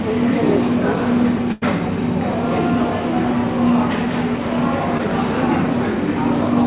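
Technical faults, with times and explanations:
1.52 to 1.64 s, burst of packet loss: About 100 ms of audio never arrived in time to be played. The receiver covered the hole for about 95 ms by extending the last sound it had and lowering its level as the gap went on. That produces a short held tone or fading hiss in place of the real sound. When the stream picks up again, it jumps ahead, and the audio from the gap is simply gone.
4.98 to 5.01 s, short concealed packet loss: Here the missing stretch is only about 20 ms. The receiver patched it by continuing the preceding sound for about 13 ms, then crossfading back into the real signal. The result is a brief smear or wobble rather than an obvious hole. A short, sharp event at that point can disappear entirely. The whole clip carries nothing above 4 kHz, which fits a narrowband telephone codec.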